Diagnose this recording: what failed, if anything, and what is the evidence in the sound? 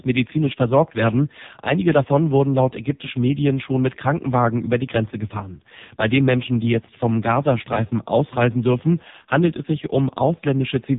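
AMR narrowband mobile codec, present throughout the speech: the codec stage failed to preserve quality. Nothing above 3.8 kHz survives, and the voice is heavily buzzy and synthetic, as a vocal-tract model driven by sparse pulses per frame replaces the waveform, which fits a very low AMR-NB bitrate near 5 kbps.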